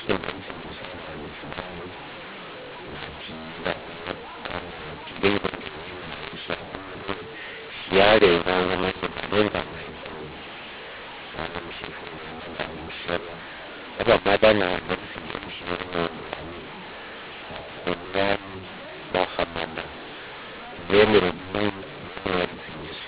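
Mu-law and A-law mixed up throughout this telephone speech: mu-law G.711 samples are decoded as A-law, scrambling levels so speech turns harsh and distorted while pauses fill with noise.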